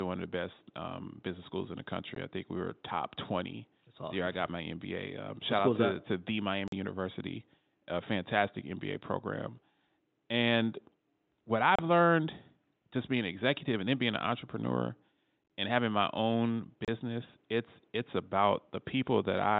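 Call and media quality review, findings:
Unconcealed Bluetooth headset packet loss: abrupt silent holes at 2.15 s (15 ms), 6.68–6.73 s after "out to to the", 11.76–11.79 s before "learned just being an", 16.85–16.88 s. Hard edges, no smoothing, so not concealment. Link dropped mSBC packets and silence or an idle pattern filled them.

Same fault at 15.44–15.50 s, between "then being an entrepreneur" and "and having my own": scattered gaps over 60 ms, longest about 22.5 ms, giving brief chopping rather than one hole.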